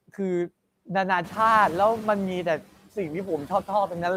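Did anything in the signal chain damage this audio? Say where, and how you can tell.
Yes. The damage comes from call processing. Noise suppressor artifacts run through the whole clip. The background noise is cut by about 17 dB, band by band and frame by frame. It sinks between the words and rises again underneath them. That pumping is the suppressor's gating.

The second fault is the noise suppressor catching up, from 1.23 to 2.58 s. Room noise jumps by roughly 12 dB just after 1 s. The suppressor's noise estimate lags, so at first only about 6 dB is removed. It adapts over 1.35 s, and then the noise sinks.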